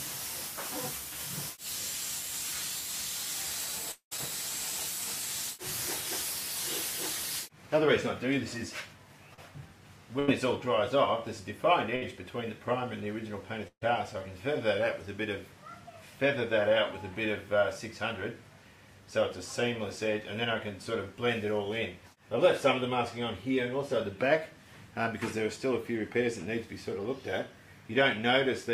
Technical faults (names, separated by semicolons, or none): long network dropout; short concealed packet loss; burst of packet loss